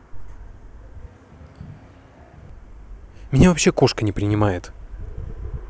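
A switch to a distant microphone in this speech recording, from 1.06 to 2.50 s, makes the sound abruptly roomy and thin, about 5 dB quieter with more room noise, likely because the close microphone dropped out.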